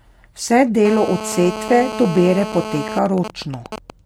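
The clip is speech with GSM phone buzz from 0.85 to 2.99 s. A 2G phone nearby is in a call, transmitting radio bursts 217 times a second. The audio circuit rectifies them. The result is a raspy 217 Hz buzz with many harmonics, about 10 dB below the speech. GSM signalling bursts follow from 3.06 to 3.90 s. The phone's user has gone silent in the call, so the phone sends only short groups of bursts. These are heard as even ticks, with a longer 217 Hz buzz twice a second, at roughly 10 dB under the speech.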